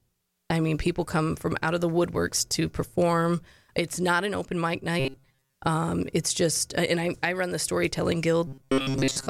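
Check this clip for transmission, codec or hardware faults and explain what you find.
Robotic sound from repeated short buffers occurs twice: from 5.00 to 5.55 s, right after "not an open mic", and from 8.47 s to the end, after "I run the storytelling". Audio likely arrived too seldom, so playback looped roughly 7.5 ms snippets in place of most of the real signal. That loop imposes a fixed 134 Hz buzz, turning the speech rigid and metallic.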